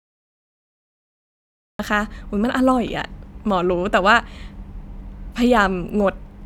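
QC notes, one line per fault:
0.00–1.79 s, cut-off start: the speech is absent for the first 1.79 s, then enters abruptly mid-sound at 1.79 s with no natural attack or fade-in, because capture or streaming began late and the opening of the utterance was never recorded.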